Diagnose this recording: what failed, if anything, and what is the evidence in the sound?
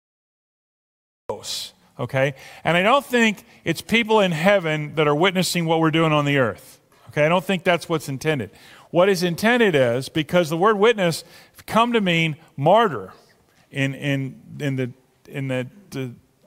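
Cut-off start, 0 to 1.30 s: the file holds digital silence until 1.30 s, where the sound enters abruptly mid-event with no attack or fade-in. Capture or stream recording began late at the driver or buffer stage, after the source was already sounding.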